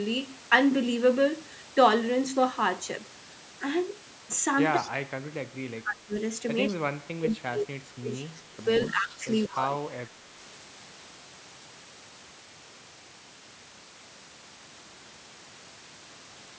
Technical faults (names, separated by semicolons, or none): echo leak; speech suppressed in double talk